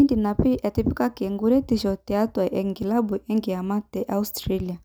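No technical faults can be heard in the speech. Nothing in the audio calls for a timestamp or a correction.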